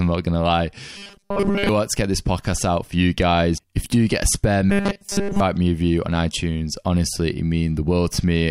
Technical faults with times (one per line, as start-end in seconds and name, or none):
0.97-1.69 robotic sound from repeated short buffers
4.70-5.40 robotic sound from repeated short buffers